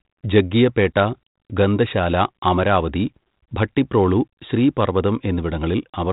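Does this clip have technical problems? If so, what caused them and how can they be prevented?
No, this clip has no technical problems, so there is nothing to prevent.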